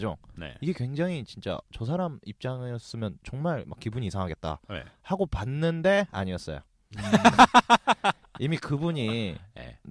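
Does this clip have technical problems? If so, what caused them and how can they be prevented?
No, there are no faults.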